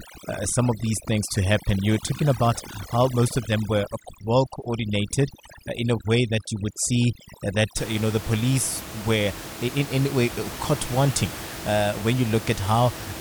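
From the start to about 7.77 s, just before "you know", the gaps between phrases drop and break up into twinkling specks. This is overdone noise removal. A noise reducer set too strong pulls individual frequency bands down or out whenever they come close to its noise estimate, so the room noise, sitting about 13 dB below the speech, is stripped away along with the quieter parts of the voice.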